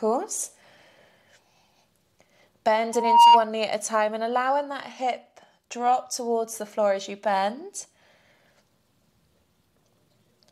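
A microphone picking up the loudspeaker it feeds closes a loop whose gain exceeds one at about 936 Hz, causing loudspeaker feedback squeal from 2.93 to 3.46 s. That single tone swells over roughly a third of a second into a piercing squeal that stands well above the rest of the audio.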